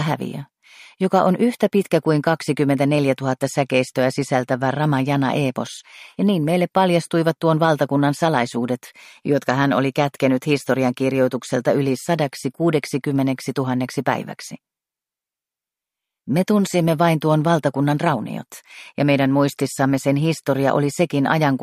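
Nothing goes wrong anywhere in this recording, so there's no fault to point to.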